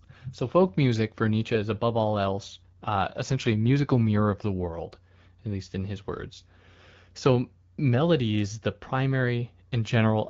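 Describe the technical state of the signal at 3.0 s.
At 3.0 s the signal sits inside an AMR rate drop running from 2.28 to 4.33 s, between "is above all" and "the world at least". The AMR-WB codec spends fewer bits on the speech itself, and the texture points to a step from 12.65 down to 8.85 kbit/s. The voice sounds rougher and more synthetic, with no gap. On a spectrogram the upper band edge stays put, but the harmonics look smeared and grainier. The waveform shows no dropout.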